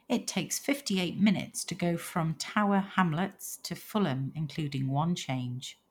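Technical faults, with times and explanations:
No technical faults are present in this speech recording. There is nothing here to give a time or an explanation for.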